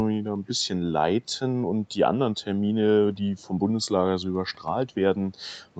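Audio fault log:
No faults found in the speech; the band stops at 8 kHz, as expected for a call path.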